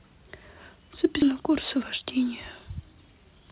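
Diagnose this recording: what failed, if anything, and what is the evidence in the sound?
The network side and the jitter buffer are at fault here. At 1.22 to 1.24 s there's a skip ahead: the speech jumps forward with no fill, and somewhere around 0.4 s of audio is simply gone. That stretch was dropped, either on the way or by the buffer, while later packets were already queued, and the two sides were then stitched together almost directly.

Right after that, from 1.31 to 3.41 s, you get a jitter buffer speed-up. The speech runs about 8% fast at the same pitch and sounds a bit rushed. The buffer was still holding extra audio, so it kept trimming short pitch-period chunks, roughly 0.15 s in total, to pull the delay back down. All of this sits on the G.711 mu-law call path, which is why nothing comes through above 4 kHz.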